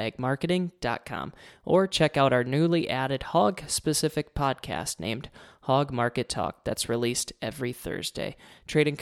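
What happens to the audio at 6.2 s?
Nothing goes wrong at 6.2 s: the speech there is intact, with no dropout, click, distortion or other fault.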